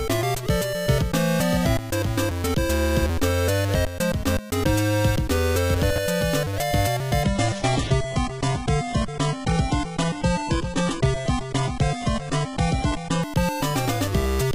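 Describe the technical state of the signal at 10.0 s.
At 10.0 s the signal is in a stretch where the adaptive stream has dropped to a lower bitrate. It runs from 7.23 s to 13.23 s. A slower connection made the player switch to a leaner encoding. The switch is abrupt, with no gap. Nothing is present above 11.1 kHz, so the top end sounds dull. Codec artefacts are stronger. The sound fits a low-rate HE-AAC stream replacing a fuller AAC one.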